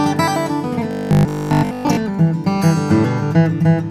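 From 0.91 to 1.97 s the sound turns into a rigid, metallic drone with a fixed pitch around 50 Hz, the robotic sound from repeated short buffers. Most of that stretch is a copy of the previous slice, which fits 20 ms buffers being replayed, likely because new audio arrived too seldom. A waveform shows identical blocks every 20 ms, and a spectrogram shows evenly spaced horizontal harmonics at multiples of 50 Hz.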